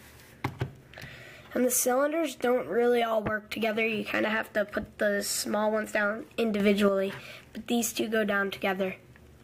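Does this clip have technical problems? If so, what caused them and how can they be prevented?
Yes. A sudden gain jump occurs from 6.6 to 6.89 s: the sound and its background noise rise together by about 6 dB at once, then drop back. The likely cause is a digital gain setting applied without a ramp. Applying gain changes with a short crossfade or ramp prevents this.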